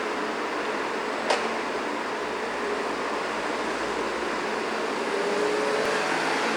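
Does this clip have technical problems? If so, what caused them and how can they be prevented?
Yes. The audio skips at 2.88 s and 5.86 s, each time losing roughly 20 ms. The two sides join with no gap. The skips are 3 s apart. This is likely audio missing between chunks, lost while one 3-second chunk closed and the next opened. Prevention: buffer continuously so chunk boundaries overlap and no samples drop.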